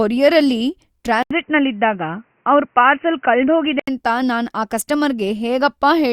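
A speech clip where, at 1.23 s, the sound suddenly goes dull and boxy after a brief gap of about 80 ms, with nothing above 3 kHz and a faint new background noise well under the speech. The level barely moves. At 3.88 s it opens back up. That's most likely the input switched to a poorer device, a narrower-band mic or headset call profile, and then switched back.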